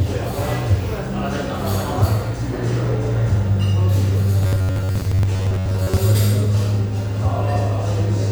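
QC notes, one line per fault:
4.43–5.97 s, robotic sound from repeated short buffers: the sound turns into a rigid, metallic buzz fixed at 93.8 Hz that still loosely tracks the original contour. This is likely buffer starvation, with playback filling the gaps by looping the last fragment of roughly 10.7 ms and skipping the real audio. A buzz pitch of 93.8 Hz fits that loop length. Around 70 percent of this span is repeated material.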